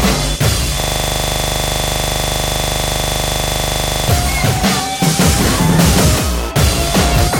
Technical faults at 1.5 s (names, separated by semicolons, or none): system hang loop